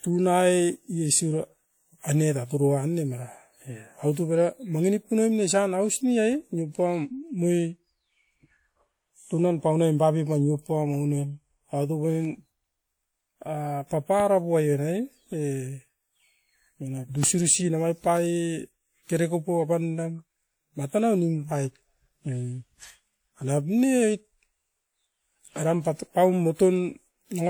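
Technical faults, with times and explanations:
14.20 to 14.22 s and 17.23 to 17.26 s, loud pop: a single sharp pop sits on top of the speech each time, about 10 dB and then about 15 dB above it. The likely cause is a sudden voltage pulse, such as static or a switch, which the following circuits shape into a pop.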